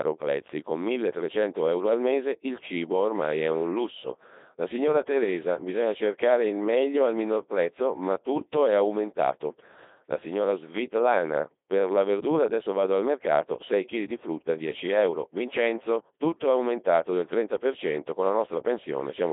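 From start to end the speech passes through a Codec 2 vocoder, and the heavy artefacts fit its 2.4 kbit/s mode. Only pitch, voicing, energy and spectral envelope survive, resynthesised from sine waves, so voices sound robotic and buzzy, confined to roughly 300 Hz to 3.6 kHz, with nothing above 3.7 kHz.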